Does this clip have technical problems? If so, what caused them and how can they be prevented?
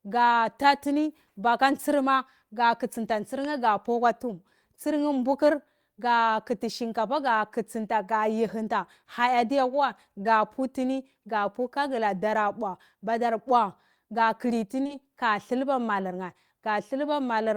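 Yes. Short concealed packet loss occurs at 10.23–10.27 s, just before "putini ka", and twice in a row at 14.83–14.91 s, just before "ka thilba": about 20 ms of speech arrived too late each time, and the receiver synthesised a continuation from the preceding sound before blending back. This leaves brief smears or wobbles, and the back-to-back pair at 14.8 s sounds longest. Prevent it with a more stable network path, a larger jitter buffer, or forward error correction in the codec.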